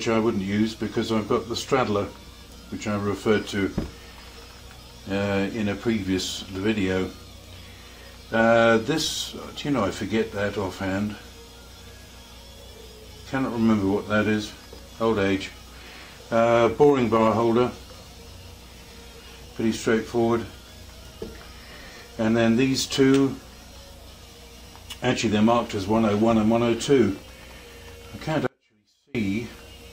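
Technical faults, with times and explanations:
28.47 to 29.15 s, audio dropout to a faint residue: the sound cuts off abruptly for about 0.68 s, leaving only a faint residue roughly 35 dB below the signal's normal level, then returns just as suddenly. This likely comes from the wanted signal being interrupted while the path after the break stayed live. Unlike a dropout to digital silence, the gap is not dead, and unlike a pause or fade, there is no gradual change at either edge.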